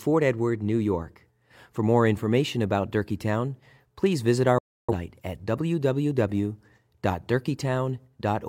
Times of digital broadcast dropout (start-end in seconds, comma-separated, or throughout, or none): 4.58-4.93